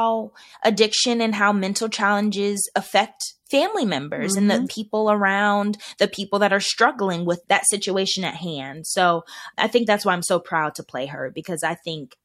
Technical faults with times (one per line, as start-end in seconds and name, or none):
none